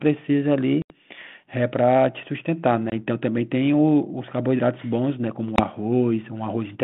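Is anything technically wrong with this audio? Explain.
Yes. Packet loss on an ADPCM call cuts abrupt silent holes at 0.82 s (about 80 ms, several packets), 2.9 s and 5.56 s (20 ms each, a single packet). The decoder's adaptive predictor and step size drift from the sender's, so sound resumes briefly and slightly distorted before resettling.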